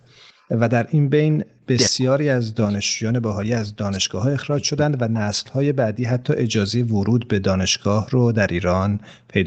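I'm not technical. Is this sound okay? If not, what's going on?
No. Two problems are audible.

Echo leak, from 0.32 to 0.47 s: a faint second copy of the voice arrives about 0.18 s behind the original, like a quiet ghost trailing it. This is likely a call where the other person used a loudspeaker, and their phone or computer failed to fully cancel the sound its microphone picked up from that speaker, so a scrap of it was sent back down the line.

Speech suppressed in double talk, at 1.54 to 1.63 s, 1.88 to 2.72 s and 2.97 to 5.29 s: the voice drops sharply, at its deepest to near silence. The likely cause is both sides talking at once. The echo-cancelling system could not tell the real talker apart from the loudspeaker echo, so it turned everything down together, chopping out stretches of the voice.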